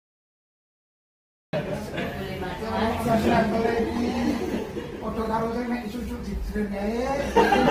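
The first 1.53 s are dead digital silence, and then the sound just appears mid-stream with no attack or fade-in. That's a cut-off start: capture began late, so we're hearing the sound chopped open partway through, with an abrupt edge at 1.53 s.

From 3.04 s to the end, the quality suddenly drops without any gap, with more codec smear. That's an adaptive stream switching to a lower bitrate, and it sounds like a step from around 64 down to roughly 16 kbit/s Opus.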